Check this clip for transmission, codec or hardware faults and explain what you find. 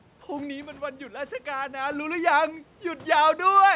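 One fault appears, near the very end of this speech clip, beside the call path's 4 kHz bandwidth limit from G.711 mu-law coding. From 3.39 to 3.74 s the automatic gain is falling: the gain control judged the input too loud, or its background noise too strong, and eased its gain down by about 3 dB. The room noise sinks along with the speech, which sets it apart from the talker moving around 0.5 and 2.0 s, when only the speech level changes.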